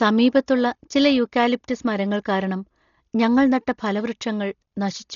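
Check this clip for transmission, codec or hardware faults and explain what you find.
One codec fault runs through the whole clip.

Throughout, the speech sounds dull, with nothing above 7 kHz and a rough, fluttering noise around voiced sounds. The likely cause is heavy Dolby Digital compression at a starved bitrate, consistent with about 32 kbps. Frequency lines left without mantissa bits are refilled with dither noise. That makes the damage hiss-like roughness rather than the watery, swirling artefacts of MP3.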